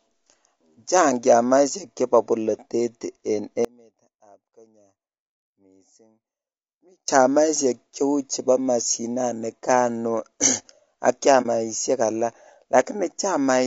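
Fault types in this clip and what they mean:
Low-delay AAC compression: the speech sounds rough and grainy throughout, with noise between harmonics, most likely AAC-ELD at a low bitrate near 32 kbps, unlike brief localized damage.
Audio dropout to a faint residue: from 3.65 to 7.08 s the speech cuts abruptly to a faint leak about 30 dB down, likely a lost signal feeding a path that stayed live, unlike a clean pause.
AAC frame loss with muting: at 11.42 s a brief 30 ms dip fades out and in, far shorter than the dropout.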